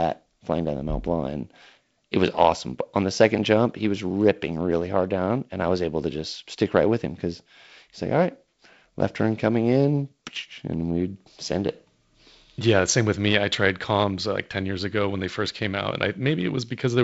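No faults can be heard in the speech, which carries the character of G.722 wideband telephone coding, with nothing above about 7.7 kHz and a light graininess in both bands that fits the codec's reduced 48 kbit/s mode.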